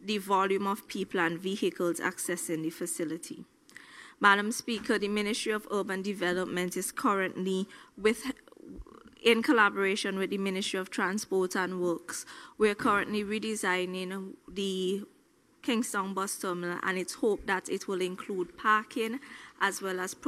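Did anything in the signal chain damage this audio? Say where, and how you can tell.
No, nothing in the chain audibly damaged this audio.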